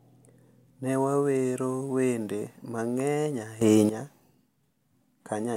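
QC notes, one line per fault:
3.61 to 3.89 s, sudden gain jump: the speech and its background noise leap up together by about 12 dB with no ramp, then drop back, likely from a gain setting applied instantly. The waveform shows an abrupt step in envelope height; the spectrogram brightens uniformly across all frequencies for that stretch.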